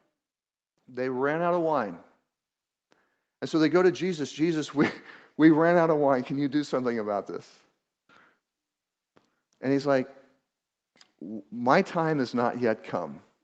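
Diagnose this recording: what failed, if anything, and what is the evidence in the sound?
The failure is automatic gain rising in the call processing stage. Between 0.86 and 2.02 s the speech and the room noise under it swell together by about 6 dB over roughly a second. That shared rise points to the AGC deciding the input was too quiet and ramping its gain up, not to anyone moving closer. The audio runs through a call path whose top end stops near 8 kHz, which fits wideband Opus.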